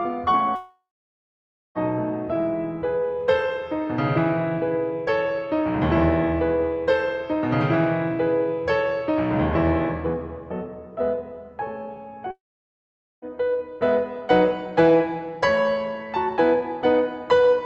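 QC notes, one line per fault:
0.55–1.78 s and 12.31–13.25 s, long network dropout: the music turns into a fading buzz that settles into silence for most of each gap, then resumes with about 1.2 s and 0.9 s gone. Likely lost packets, with the receiver briefly extending the last sound.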